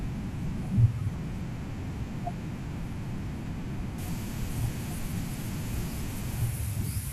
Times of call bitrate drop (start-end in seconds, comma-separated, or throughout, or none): none